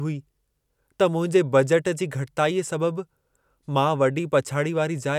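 No technical faults can be heard anywhere in the recording, so there is nothing to describe in time order.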